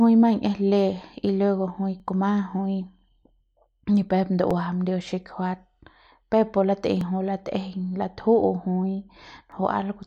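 A speech clip with overlapping chunks. Short clicks or stutters fall at 2.00, 4.51 (just after "ni pep"), 7.01 and 9.52 s. They recur every 2.5 s. Each new chunk starts early, so about 7 ms of sound plays twice at every join.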